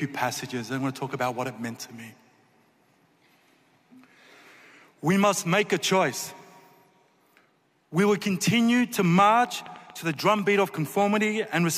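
From 8.99 s to 11.03 s a train of clicks ticks and pops over the sound, about 7.9 per second at an uneven pace, around fifteen in all. The clicks share much the same sharp shape, stand out a few decibels above the surrounding audio, and carry on through any gaps. Repeated pulses like these most likely come from electrical interference from nearby equipment or a faulty connection or power supply.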